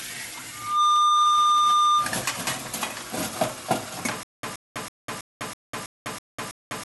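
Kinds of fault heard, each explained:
Loudspeaker feedback squeal, 0.52 to 2.21 s: a 1.2 kHz tone swells within roughly a third of a second to about 10 dB above the sound, as mic and speaker loop.
Stutter with silent gaps, 4.23 s to the end: a 125 ms fragment replays every 325 ms with 200 ms of digital silence between, likely a stalled stream retrying.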